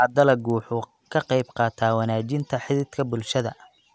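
A resampler restarted on every block runs through this speech recording from start to finish. Each 100 ms block was converted on its own, apparently from 48 kHz down to 16 kHz, leaving an error at every edge. The result is a regular tick at 10 Hz that is heard only while sound is present.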